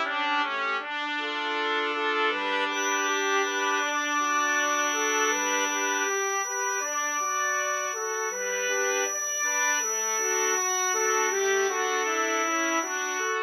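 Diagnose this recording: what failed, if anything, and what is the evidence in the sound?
A thin, steady whistle at 5.9 kHz enters at 2.69 s and runs to the end of the recording, sitting only a few decibels below the main sound and swelling and fading slowly in level. This is a feedback whistle, most likely from the acoustic path between loudspeaker and microphone. The loop gain is held right at the edge of oscillation, so one frequency sustains indefinitely without building into a runaway howl.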